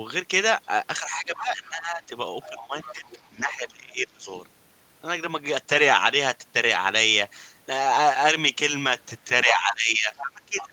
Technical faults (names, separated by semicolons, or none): speech suppressed in double talk; other side's voice leaking through